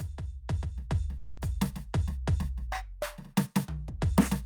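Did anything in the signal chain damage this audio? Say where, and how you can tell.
Yes. At 1.17 s the music stops moving forward. For about 200 ms, until 1.39 s, the last sound is stretched into a fading buzzy tail, and then playback picks up exactly where it stopped. Nothing is skipped, so everything after the gap arrives roughly 200 ms late. That signature is a call audio freeze at the network stage, likely from packets delayed in transit that left the receiver's jitter buffer empty while it padded the hole with synthesised continuation.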